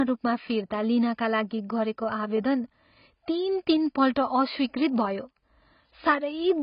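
AAC compression throughout: the speech stops at 5.1 kHz and sounds dull, smeared and fizzy, likely from heavy AAC-LC coding at a bitrate around 16 kbps.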